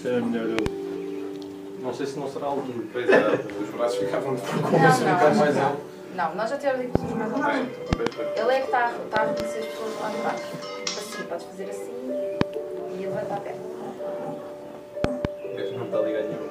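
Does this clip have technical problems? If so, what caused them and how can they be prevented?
Yes. Loud pops occur at 0.59–0.68, 6.95–6.98, 7.93–8.09, 9.17–9.42, 12.41–12.43 and 15.04–15.27 s, in pairs except at 6.95 and 12.41 s. They rise well above the sound, which continues beneath. The likely cause is voltage steps from connectors, switching or static. Secure cables and properly grounded equipment prevent them.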